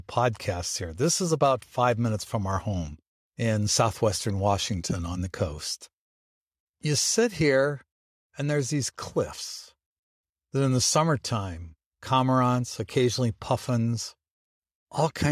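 Listening through the recording, nothing stood out as a technical fault at any point.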